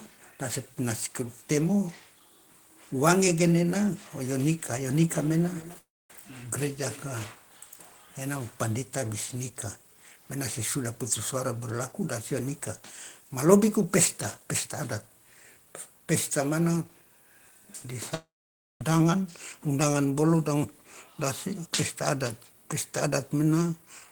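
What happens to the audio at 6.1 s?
At 6.1 s the sound is returning from a gap that began at 5.78 s. About 0.3 s of audio is missing. The last sound is stretched into a fading buzz, then silence for about 0.24 s. This is likely a long network dropout.

Throughout, from 5.09 s to 7.36 s, there is feedback echo between two devices. A second device in the room replays the sound, and this microphone picks it up again. Thin, ringing repeats come back roughly every 0.3 s, peaking at about 18 dB below the speech.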